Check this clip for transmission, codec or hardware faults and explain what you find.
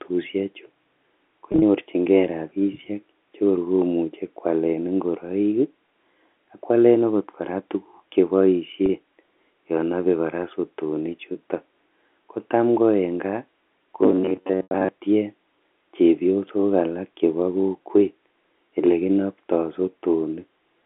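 Two transmission faults can be heard in this speech clip, over a telephone band of 250 Hz to 3.5 kHz.

Packet loss with pitch repetition occurs at 1.52 to 1.62 s, 8.86 s, 11.33 s and 14.63 to 14.71 s. The receiver bridged each gap by repeating the last pitch period. The first event loses 70 ms scattered over 100 ms, with no run longer than 30 ms. The last event loses 80 ms. The lost spans fit 10 ms packets. The shorter gaps sound like a briefly held, buzzy tone.

Robotic sound from repeated short buffers runs from 14.01 to 14.89 s. It overlaps the last packet loss. The voice becomes a rigid, metallic buzz at 93.8 Hz. It still roughly follows the speech. This is likely caused by fresh audio arriving too seldom, so most of the span is filled with a repeated segment of about 10.7 ms.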